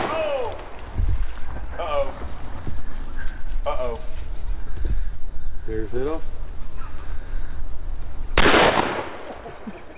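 No technical faults can be heard anywhere in this audio; the signal stays steady and intact throughout.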